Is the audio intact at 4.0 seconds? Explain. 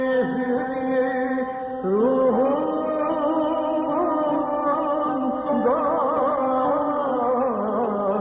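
Yes, the audio at 4.0 seconds is intact, with no dropout, click, distortion or other fault audible at that moment.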